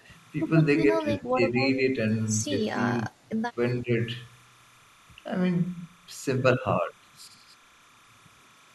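Timecode bleed runs throughout: linear timecode at 29.97 frames per second leaks in faintly, about 30 dB down, as a steady chirping warble switching between roughly 1 and 2 kHz. Speech suppressed in double talk appears at 0.0–0.04, 0.99–1.56, 2.88–3.2, 3.38–3.57 and 3.81–3.93 s. The speech dips by roughly 10 to 20 dB, likely because an echo canceller confused it with far-end echo.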